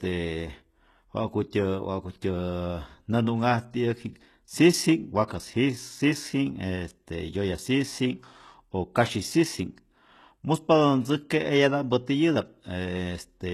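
A speech recording that carries HE-AAC compression damage from start to finish, plainly audible throughout. Nothing reaches above about 12.3 kHz, and the upper band that remains is treble rebuilt from copied lower bands rather than the original. Sibilants come out gritty and metallic because the replicated harmonics don't line up with the real ones. On a spectrogram the top region looks like a smeared, blocky echo of the band below it, ending at a hard ceiling. The likely cause is spectral band replication at a very low bitrate, which fits something around 16 kbps. Pre-echo appears from 5.28 to 5.30 s: a short hiss spreads about 26 ms ahead of a sharp onset, which sounds softened. A waveform shows a low noise smear rising before the attack instead of clean silence, and a spectrogram shows broadband speckle leading into the transient, where the codec spread its quantisation noise across the whole block.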